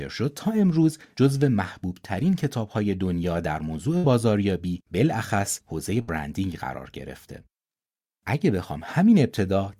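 A speech clip with two bursts of packet loss, at 3.97 to 4.06 s and again at 6.01 to 6.10 s. Each time a run of packets went missing, and the receiver covered the hole by stretching out the last bit of sound for about 60 ms, letting it fade. Depending on what was being said, that reads as a short held buzz or a dying hiss. Then the speech picks up roughly 60 ms further along, so that stretch is simply gone.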